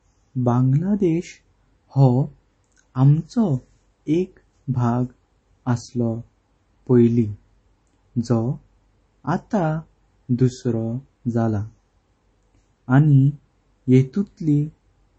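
Throughout the speech, nothing is present above 8.3 kHz, and the sound has a plainly audible watery, swirling quality, most likely from MP3 compression at a low bitrate, which fits roughly 32 kbps. Short of bits, the encoder cut the treble at a fixed point and dropped weak frequency lines frame by frame. On a spectrogram this shows as a hard ceiling at 8.3 kHz, with patchy, flickering blocks below it instead of smooth detail.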